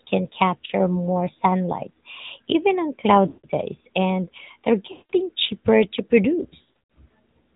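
Speech passed through the AMR narrowband mobile codec: nothing above 4 kHz survives, and a plainly buzzy, synthetic texture points to a mode near 10 kbps, unlike simple telephone band-limiting. Lost AMR speech frames occur at 0.66 s before "more sunlight even on" (a brief dip), 3.28 s after that phrase, 4.92 s, and 6.62 s after "cheaper to." In each, the sound is stretched and fades rather than cutting off abruptly.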